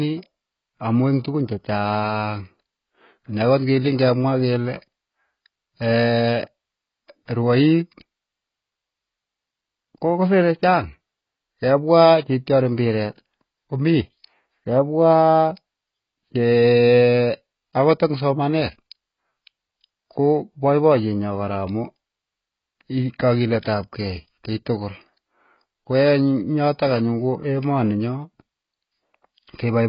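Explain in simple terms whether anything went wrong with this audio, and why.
The audio was likely squeezed hard by AAC compression, so throughout the speech it sounds dull and smeared, with nothing left above 5.2 kHz.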